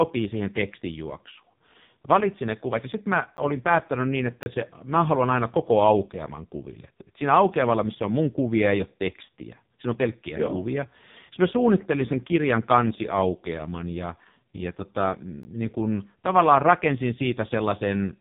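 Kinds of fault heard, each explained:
AMR narrowband mobile codec: This speech has passed through the narrowband codec used on 2G and 3G phone calls. It rebuilds the voice from a vocal-tract model fed by a few pulses per short subframe. Here the damage is heavy. The voice sounds buzzy and synthetic, which fits the low 5.15 kbps mode. Nothing comes through above about 3.8 kHz, so the sound is muffled and boxy throughout.
Block of digital silence: The audio drops to silence for a moment and then returns, with no fade on either side. This happens most often when the output buffer isn't filled in time. Here there are three. A 10 ms tick comes at 3.37 s. A 30 ms hole runs from 4.43 to 4.46 s. A 16.6 ms gap falls at 15.43 s.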